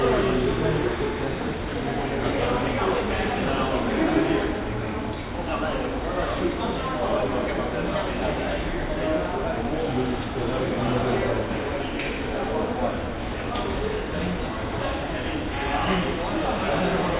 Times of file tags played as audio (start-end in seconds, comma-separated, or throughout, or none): none